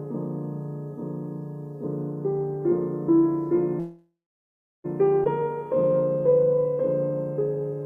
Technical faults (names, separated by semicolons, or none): call audio freeze; skip ahead; jitter buffer slow-down